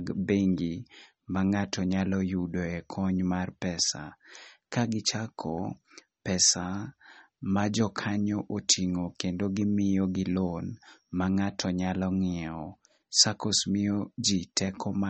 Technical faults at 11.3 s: MP3 compression

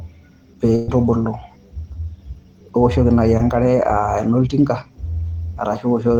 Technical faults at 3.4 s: short concealed packet loss

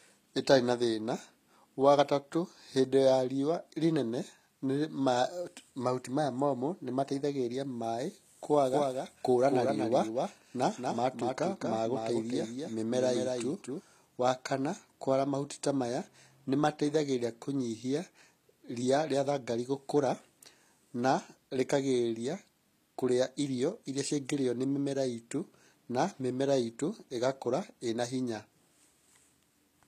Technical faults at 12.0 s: HE-AAC compression; doubled audio track

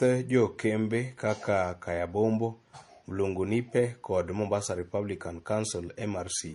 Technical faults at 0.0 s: transcoding between lossy codecs

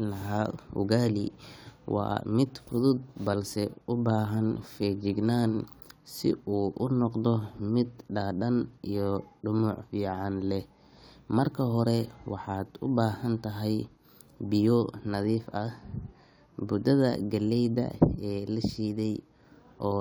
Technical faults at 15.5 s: none

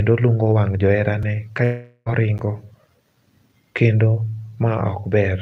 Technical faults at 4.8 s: none

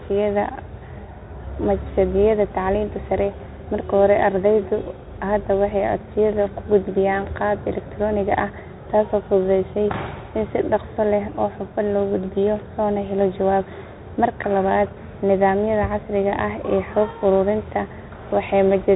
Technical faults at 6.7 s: Bluetooth CVSD headset codec

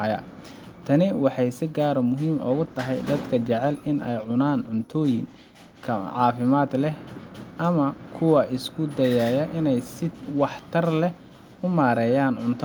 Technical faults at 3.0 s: call bitrate drop

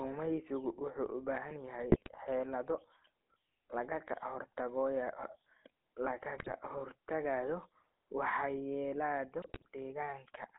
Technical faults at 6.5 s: GSM full-rate codec; GSM bit errors

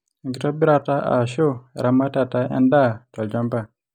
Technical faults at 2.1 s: none

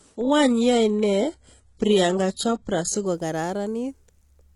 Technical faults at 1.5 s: adaptive stream starting at a low bitrate

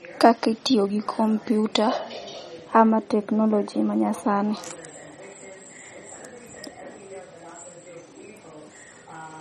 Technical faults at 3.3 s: MP3 compression

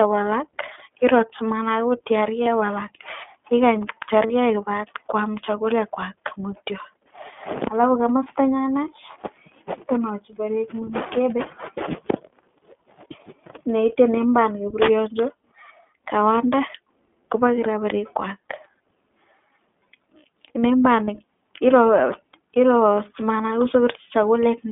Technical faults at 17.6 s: iLBC codec; lost iLBC frames

